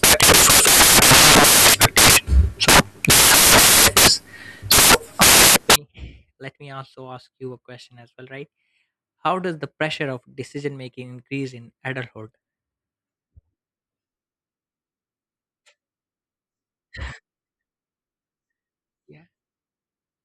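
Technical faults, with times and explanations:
0.00 to 5.76 s, samples built from the wrong bytes: the speech turns into loud, harsh broadband noise. Each sample's bytes are joined in the wrong order or alignment, so the rapidly changing low bits become the large part of each value.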